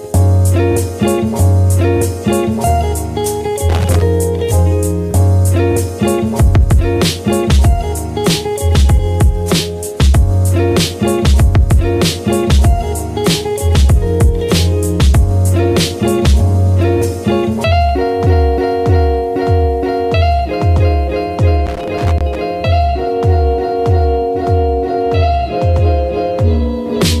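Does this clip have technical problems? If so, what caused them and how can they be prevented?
Yes. Loose connector crackle appears from 3.69 to 4.02 s and from 21.66 to 22.39 s: a worn or dirty contact intermittently opens and closes, chopping the signal into irregular scratchy bursts. Clean or replace connectors and secure cables against movement.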